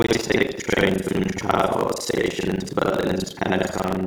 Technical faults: buffer tearing

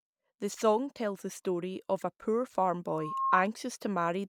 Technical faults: loudspeaker feedback squeal

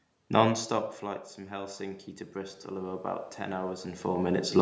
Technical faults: automatic gain rising

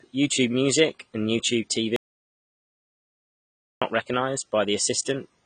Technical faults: AAC compression; audio dropout to silence

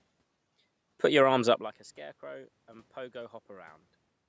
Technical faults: automatic gain rising

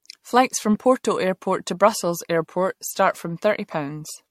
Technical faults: generation loss

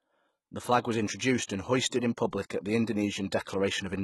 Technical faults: HE-AAC compression; pre-echo

